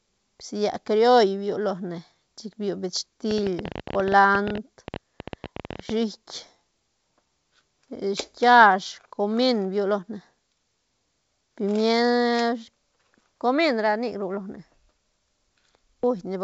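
A train of clicks runs from 3.31 to 5.90 s in this speech recording: roughly forty similar pulses at an uneven pace averaging 14.3 per second, peaking around 10 dB above the speech and ticking through pauses too. It is likely caused by interference from nearby equipment or a faulty connection or power supply. The wideband telephone-style G.722 coding leaves at most a faint trace.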